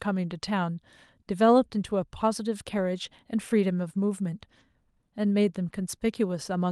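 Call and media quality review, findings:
Lost packet rebuilt from error correction, 2.77–2.79 s and 4.59–4.61 s. Symptom: a brief rough, noisier patch, no dropout. Component: Opus decoder in-band FEC. Mechanism: each lost 20 ms packet is replaced by the low-bitrate copy carried in the following packet. Unlike plain packet-loss concealment, there is no buzzy, smeared repeat of the preceding sound and no fade, just a coarser frame within the call path's roughly 12 kHz band.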